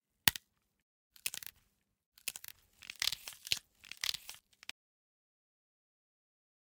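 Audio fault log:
1.37–4.39 s, doubled audio track: a second full-band copy of the sound runs about a second behind the original, at roughly the same level, so every event is heard twice in quick succession. The copy carries no decay or room colour, and it switches in at 1.37 s and out at 4.39 s abruptly rather than fading. This likely comes from the same signal being captured again through a slower path, or from an edit that left two copies out of step.
4.71 s to end, audio dropout to silence: the sound cuts off mid-flow at 4.71 s and does not return before the clip ends. The gap holds no room tone or background at all, only silence, so whatever happened after that point is lost. The likely cause is that the input was lost, through a disconnected device, a failed link or an accidental mute, while the recorder kept writing silence.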